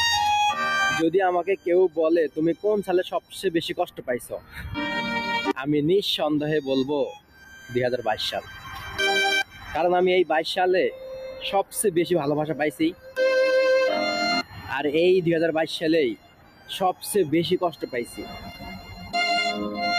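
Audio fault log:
throughout, noise suppressor applied to music or sounds: a suppressor tuned for speech stays active and treats steady tones, ambience and reverb as noise, so gain swings by roughly 15 dB. Onsets get through while held material and tails sink. The result is pumping and thinning that follows steadiness rather than loudness, which is how it differs from a compressor.
1.56–4.78 s, 7.09–9.75 s, 10.91–11.74 s, 12.52–13.18 s, 14.43–14.71 s, 16.15–17.03 s, 17.7–19.14 s, sound cut by the noise suppressor: sustained or decaying sound drops by about 14 to 18 dB, for somewhere between a third of a second and one and a half seconds within each span. Decays are cut short but attacks mostly get through, and the level sinks instead of going silent, unlike a dropout.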